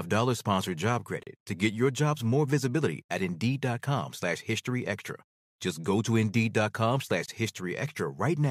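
At 1.23 to 1.27 s and again at 7.26 to 7.28 s, a gap between stream segments cuts the speech with hard-edged silence of about 35 ms and 24 ms. The holes fall 6 s apart, fitting segment boundaries. Unlike a dropout, nothing is lost: speech resumes exactly where it stopped.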